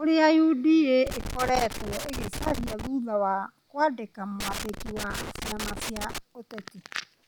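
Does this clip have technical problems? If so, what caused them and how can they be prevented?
Yes. An irregular scratching crackle breaks through the speech from 1.07 to 2.87 s, ending just before "wa kwandĩkĩra", and again from 4.40 to 6.18 s, right after "wa kwandĩkĩra". This is loose connector crackle. A worn or dirty contact in the cable path keeps making and breaking as it shifts, chopping the signal in rapid bursts. Cleaning or replacing suspect plugs and securing cables against movement prevents it.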